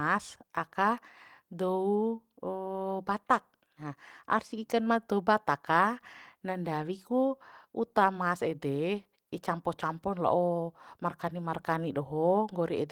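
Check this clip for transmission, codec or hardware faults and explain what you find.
Nothing wrong can be heard anywhere in this recording.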